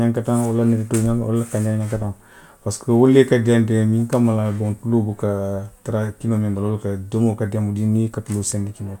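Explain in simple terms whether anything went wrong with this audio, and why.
Nothing went wrong with it.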